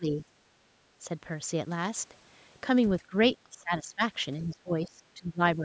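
The speech dips from 0 to 0.23 s, briefly at 3.10 to 3.14 s, from 3.44 to 4.02 s, and from 4.42 s to the end, dropping by roughly 10 to 25 dB. This is likely speech suppressed in double talk, where an echo canceller turned the talker down along with the far side's echo.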